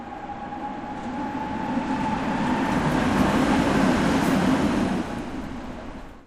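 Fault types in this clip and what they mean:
Nothing to flag here, as the sounds in this recording come across without any technical faults to point to.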